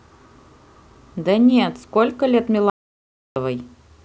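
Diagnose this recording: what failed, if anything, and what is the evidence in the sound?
Audio dropout to silence from 2.70 to 3.36 s: the speech cuts off mid-flow and resumes just as abruptly, and the 0.66 s in between is silent with no room tone at all. That places the failure upstream, at the input stage, where the signal was likely interrupted by a disconnected device, failed link or stray mute while the recorder kept writing samples. Whatever was spoken during that gap is gone.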